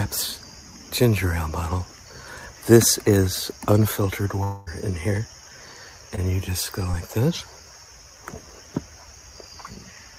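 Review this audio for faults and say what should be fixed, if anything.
From 4.43 to 4.69 s the sound gives way to a synthetic continuation of the last sound, a buzzy or hissy tail that fades out over about a quarter of a second and never drops to silence. When the audio resumes, roughly 220 ms of material is simply gone. This is a long network dropout, likely caused by the stream stalling long enough that the receiver's concealment had to cover the entire gap. To prevent it, stabilise the network path and add redundancy or retransmission so that such gaps are recovered rather than papered over.

Two brief disturbances follow, at 6.16 to 6.19 s and at 6.91 to 6.95 s. Each is a short smear or wobble where about 20 ms of audio failed to reach the decoder in time, and the receiver extrapolated from the preceding signal before blending back into the real stream. These are short concealed packet losses. 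To prevent them, enable forward error correction and size the jitter buffer to absorb late packets.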